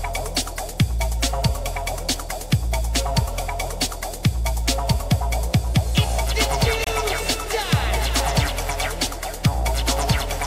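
The audio breaks at 6.84 to 6.87 s with a gap at a join of encoded pieces, about 26 ms long, after which the sound resumes where it stopped. Separately encoded segments were joined with their encoder start delay and final-frame padding left in. A spectrogram shows a narrow vertical band of missing energy across all frequencies, and the waveform shows a brief notch with codec-smeared edges.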